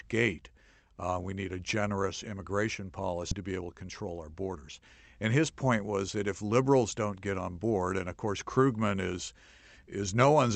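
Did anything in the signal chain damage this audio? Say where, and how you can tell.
Yes. The damage happens in the network and jitter-buffer stage of what sounds like an Opus call path, whose audio stops at about 8 kHz.

At 3.31 to 3.33 s there is a skip ahead. Roughly 0.7 s of speech is missing, and the two sides are joined directly, with no silence and no concealment fill. A stretch was dropped, either in transit or by the overflowing jitter buffer, while newer audio was already queued, so playback jumped forward. A packet-loss dropout would leave a gap or a smeared, concealed patch instead of a clean splice.

From 3.41 to 4.70 s a jitter buffer speed-up follows. The speech runs at about 114% of its normal rate, sounding hurried, but the pitch doesn't rise. The buffer was still holding more delay than its target, so it cut short pitch-period-length pieces over and over, removing around a fifth of a second in total. 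A resampling or clock error would shift the pitch along with the speed, and that doesn't happen here.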